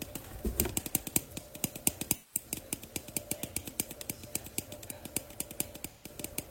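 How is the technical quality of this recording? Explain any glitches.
Two dropouts mar it, both AAC frame loss with concealment, at 2.14 to 2.45 s and 5.90 to 6.09 s. Lost encoded frames, fitting about four and three, were rebuilt by the decoder from the last good spectrum, leaving smeared, noisy or phasey patches.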